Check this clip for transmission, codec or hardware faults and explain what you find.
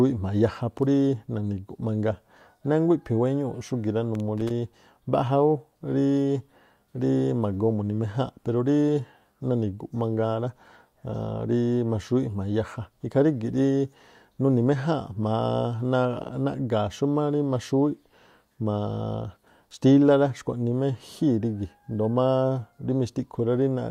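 One hardware fault is audible: loose connector crackle from 4.15 to 4.51 s. A worn or dirty contact in the signal path is briefly making and breaking as it shifts, so the speech is chopped on and off many times within that 0.36 s span, and any DC present on the line turns each reconnection into a pop. The result is a short, irregular burst of scratchy crackle riding over the speech.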